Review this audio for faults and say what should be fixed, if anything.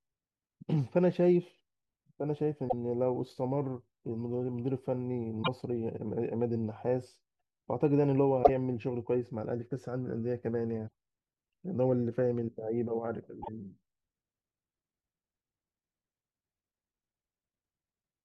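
Damaged data in a compressed stream breaks into the speech five times: 2.65 to 2.74 s, 5.40 to 5.48 s, 8.40 to 8.50 s, 10.86 to 10.93 s and 13.39 to 13.49 s. Each is a brief glitch lasting under a tenth of a second. Corrupt bytes make the decoder misread frames and hunt for the next header. Prevent it by checksumming files and retransmitting corrupted packets.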